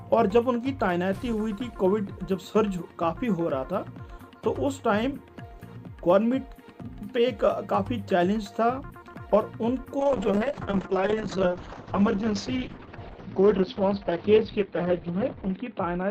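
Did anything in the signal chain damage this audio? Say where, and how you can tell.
Yes. A call bitrate drop at the codec stage, driven by the call's bandwidth estimate, begins at 10.0 s and runs to the end. The encoder falls from 48 to 7 kbps and holds at the floor for about 5.6 s. Audible evidence: the top end collapses from 20 kHz to 6 kHz, giving a muffled, dull quality, and coarser quantisation makes the sound rough and watery. The bitrate never recovers before the audio ends.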